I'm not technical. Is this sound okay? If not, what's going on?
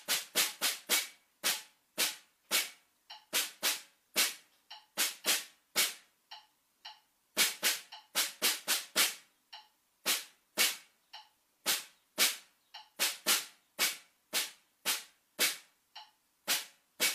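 Yes, it sounds fine; nothing is going wrong here.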